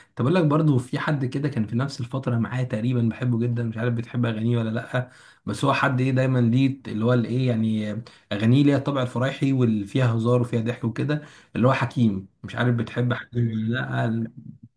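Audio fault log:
No audible faults detected.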